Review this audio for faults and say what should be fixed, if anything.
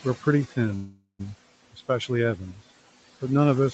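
Noise suppressor artifacts, throughout: the suppressor pulls down bands it judges to be steady noise, by about 17 dB, so the background dips between phrases and swells under the speech. Easing the suppression depth would prevent this.

Call audio freeze, 0.75 to 1.23 s: the sound is stretched into a fading buzz or hiss that ends in roughly a tenth of a second of silence, then resumes where it stopped, with nothing lost but the stream now running about 0.44 s later. Delayed packets likely emptied the jitter buffer, and a steadier network path or a deeper buffer would prevent it.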